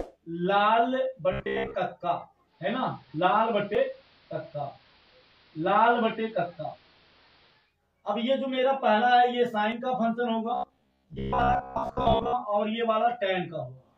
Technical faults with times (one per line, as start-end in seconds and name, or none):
1.32-1.76 robotic sound from repeated short buffers
2.45-7.75 digital radio blending to analogue
3.75 audio missing between chunks
9.72 audio missing between chunks
10.55-12.34 robotic sound from repeated short buffers